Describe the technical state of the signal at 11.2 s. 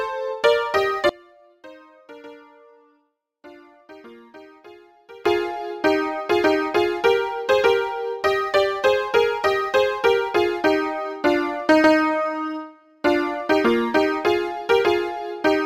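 At 11.2 s the signal is intact, with no dropout, distortion, glitch or other technical fault at that point.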